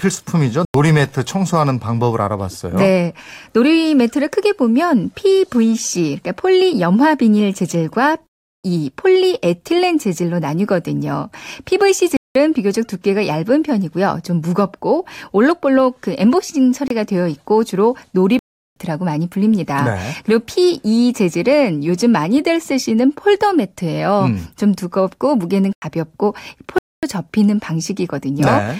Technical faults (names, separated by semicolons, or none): block of digital silence